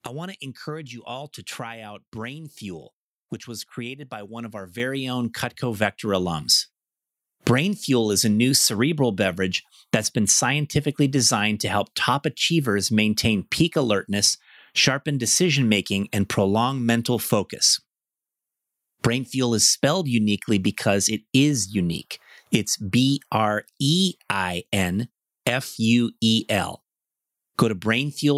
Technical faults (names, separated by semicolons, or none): microphone volume stepped up